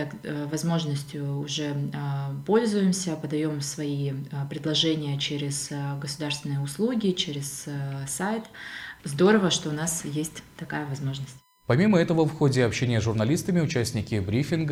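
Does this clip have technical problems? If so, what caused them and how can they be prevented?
Yes. A fixed-pitch USB whine at 1 kHz runs through the whole clip, about 40 dB below the sound. The USB bus draws current in 1 ms frames, and that pulsing leaks into the audio path through shared power or ground. Powering the interface separately or fitting a USB isolator prevents it.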